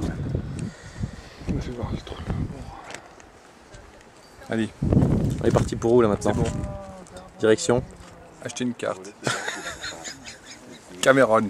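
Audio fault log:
Nothing to log here; the audio comes through without a single fault to report.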